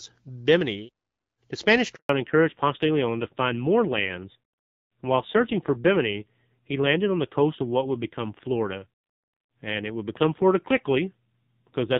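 Speech recorded over a phone call, with a handover gap and a fallback to narrowband at the same point. At 1.95 s the sound cuts out within a few tens of milliseconds and stays silent for 140 ms until 2.09 s. That pattern fits the call being switched between networks, with no speech frames arriving while the link was re-established, so whatever was said in that interval is lost. From 2.09 s to the end, everything above 4 kHz is gone and the speech turns duller and rougher than the light-damage HD Voice sound of the first two seconds. This is a fallback to narrowband: after the handover the call no longer carries wideband audio, and the rasp in the remaining speech fits a drop from about 12.65 kbit/s AMR-WB to a low-rate AMR-NB mode around 5.9 kbit/s.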